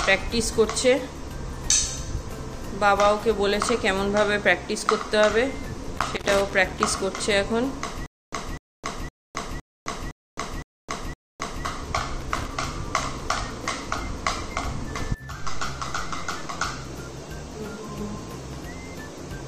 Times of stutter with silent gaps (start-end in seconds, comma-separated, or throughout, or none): 8.06-11.65